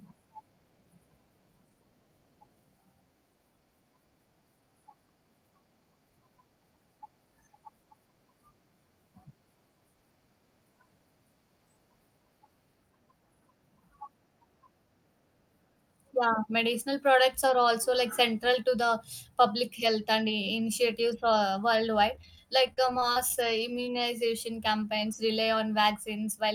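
From 22.15 to 23.40 s, just after "uh worldwide", repeated packet loss left about ten holes of up to 35 ms. Each was filled by stretching the previous sound, which makes the speech choppy.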